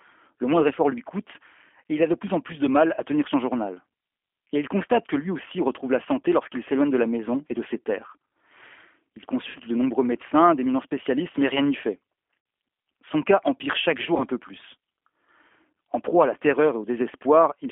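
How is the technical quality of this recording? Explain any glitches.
The recording is compressed, band-limited telephone speech with four short concealed dropouts.

G.729 codec (throughout): The speech passes through G.729A at 8 kbit/s, on a line band of roughly 250 Hz to 3.4 kHz, so it sounds thin and boxy with no lows or highs. The codec models each 10 ms frame as a vocal-tract filter plus pitch and a few pulses, and the resulting plainly audible rough, synthetic texture is what separates it from simple low-pass filtering.

VoIP packet loss concealed by the speech codec: Gaps occur at 2.94–2.99 s (between "en plus de mal" and "à tenir son journal"), 9.49–9.58 s, 12.40–12.46 s (after "mais rien n'y fait") and 14.17–14.24 s (between "cas empire chaque" and "peu plus"). Each replaces about 30 or 60 ms of lost audio, which fits one or two dropped packets. The decoder extends its last pitch and filter at falling gain, producing a stretched, fading buzz or coloured noise rather than the silence or click of a plain dropout, and the speech stays weakened briefly afterwards.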